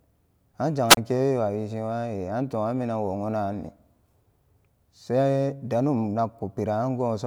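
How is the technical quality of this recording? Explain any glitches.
The recording has one glitch, a wireless microphone squelch dropout from 0.89 to 0.97 s. The FM radio link weakens, hiss briefly swells, and the receiver's squelch mutes the output for about 27 ms, leaving a short gap before the speech returns.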